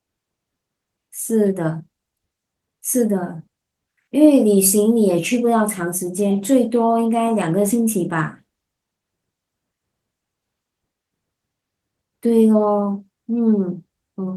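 No technical faults can be heard anywhere in the speech.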